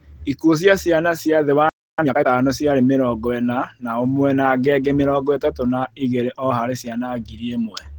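Opus voice compression runs through the whole speech clip at 16 kbps. It works in hybrid mode, with a linear-prediction layer for the lower band and a transform layer above 8 kHz. The band reaches about 20 kHz, but the coarse coding leaves the speech plainly hoarse and slightly robotic.

At 1.69 s, right after "ciana cia thĩ wa", a playback stall cuts the sound dead. The silence lasts about 0.29 s, until 1.99 s. The player likely ran short of data or was briefly blocked, so output halted mid-flow.

From 1.99 s to 2.27 s, time-compressed catch-up follows. The player clears its backlog by dropping small pieces and cross-fading the rest, at twice normal speed. The pitch stays normal, but the passage sounds rushed before "ciarĩ mĩrongo ĩna na".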